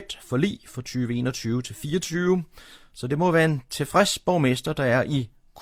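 A short bit of speech, and nothing technically wrong turns up anywhere in it.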